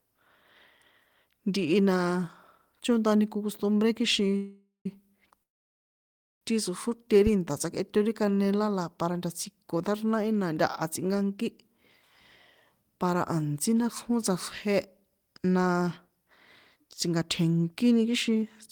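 At 4.36 to 4.86 s and 5.43 to 6.42 s the speech stops in two call audio freezes, likely from packets held up in transit while the jitter buffer ran dry. The first gap is filled with 0.49 s of fading continuation ending in brief silence. The second is 0.98 s, almost all silence. The speech then resumes where it left off, with nothing lost. From 7.81 to 8.39 s a jitter buffer slow-down repeats pitch periods, adding 58 ms and playing at 91% speed with pitch unchanged, so sounds are drawn out. Jitter buffer speed-ups at 11.21 to 11.79 s and 18.10 to 18.43 s cut about 50 ms and 40 ms, running at 108% and sounding hurried.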